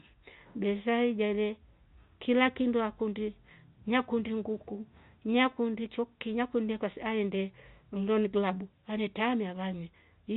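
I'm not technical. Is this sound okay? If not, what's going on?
Yes, the speech sounds fine; nothing is wrong.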